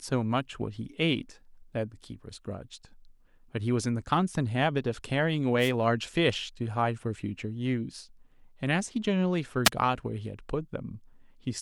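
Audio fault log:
5.59–5.71 s and 9.65–9.69 s, wireless microphone noise hit: two quick bursts of static cut across the speech, the first about 0.12 s long, the second only about 0.05 s. That's the radio link from an analogue FM mic briefly dropping as reflected signals cancel at the receiver, so receiver hiss surges up for that instant before the signal recovers, which gives each one that short swishy, staticky character.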